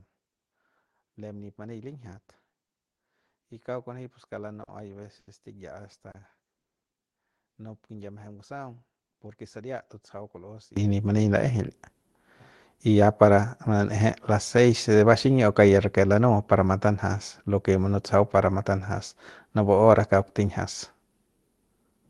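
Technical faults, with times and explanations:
0.00–10.77 s, one channel inverted: For the first ten and a half seconds the speech drops by about 21 dB and turns faint, with the centred body of the sound largely gone. This is likely one stereo channel running in reversed polarity, so the shared centre content cancels when the two sides combine and only their small difference survives. Full level returns just before "y nip mani laejeil".
4.63–6.17 s, repeated stalls (stutter): Within this span the sound catches and drags three times, with about 150 ms of filler in total and the longest hold lasting 80 ms. Each time, packets arrived too late to keep the playback buffer supplied, so the receiver stretched the last bit of sound to bridge the wait. Nothing is lost, but the delivery hitches and limps forward.
6.58–6.87 s, call audio freeze: The audio stops for 260 ms and goes silent, then resumes exactly where it left off. 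The likely cause is a burst of delayed packets draining the jitter buffer, so the receiver had nothing new to play and filled the wait. No content is skipped. Instead a 260 ms gap is inserted and the rest of the clip plays that much later.
12.88–13.68 s and 21.70–21.99 s, jitter buffer speed-up: In these two stretches the speech runs quicker without any rise in pitch, at 109% and then 115% speed. The receiver had built up more buffered audio than it wanted and trimmed tiny pitch-period-sized slices to catch up, about a tenth of a second in the first case and roughly a twentieth in the second. The result sounds rushed and clipped in rhythm.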